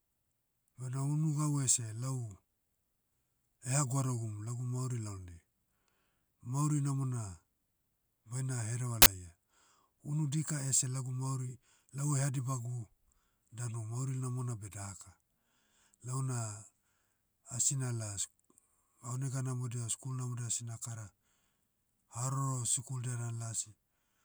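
At 9.02 s there's an uninitialised buffer, running to 9.06 s. A 40 ms block got sent to the output before any audio had been written into it, so whatever junk was sitting in that memory went out as if it were samples. You hear it as a short, loud burst of digital noise, gone almost as soon as it starts.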